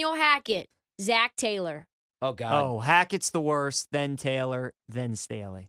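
No technical faults can be heard in this speech.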